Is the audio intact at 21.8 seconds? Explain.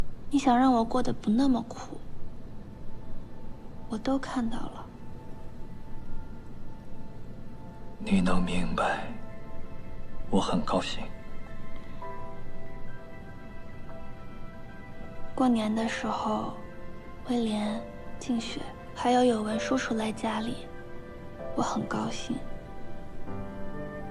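Yes, at 21.8 seconds the audio plays through intact, with no dropout, click, distortion or other fault at that point.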